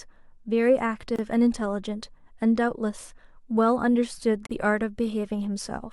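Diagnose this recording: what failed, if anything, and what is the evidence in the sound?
The failure sits at the codec stage. There are gaps at the joins of encoded pieces. The speech breaks off at 1.16 s for 27 ms, and again at 4.46 s for 43.5 ms. Each silence has its edges smeared by the codec. After each one the speech resumes exactly where it left off. The pieces were encoded separately and then joined untrimmed. The encoder's start-up delay and the padding in the final frame both stayed in as silence.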